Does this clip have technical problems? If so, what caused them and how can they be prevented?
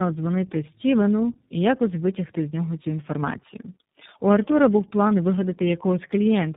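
Yes: tandem speech coding throughout. The speech sounds rough, muffled and warbly, with nothing above 3.8 kHz, which fits G.729A decoding into a G.711 leg and then iLBC re-encoding, each coder compounding the last. Prevent it by negotiating one end-to-end codec or using transcoder-free operation.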